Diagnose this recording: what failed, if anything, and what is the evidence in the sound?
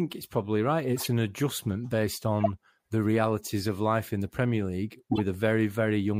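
Short squeaky noise bursts break into the speech at 0.97–1.07 s after "it's probably right", at 2.41–2.50 s before "the realities of life", and at 5.12–5.20 s. Each is a corrupt frame decoded at the codec stage: bit errors across a few frames were decoded anyway, throwing energy to the wrong frequencies.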